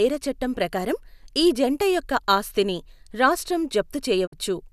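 At 4.25 s the speech fades over 20 ms into a digital broadcast dropout, silent until 4.34 s. The receiver muted on missing or corrupt frames, losing 48 ms of programme. The waveform tapers to a flat line, and the spectrogram shows a blank vertical band.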